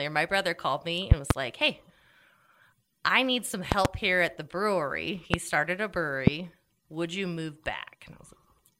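A voltage spike, likely from a switch or static discharge, hit the signal path four times. Each spike is a loud pop that jumps well above the speech, which carries on underneath. There are double pops at 1.12–1.33 s and 3.72–3.88 s, and single pops at 5.34–5.36 s and 6.27–6.30 s.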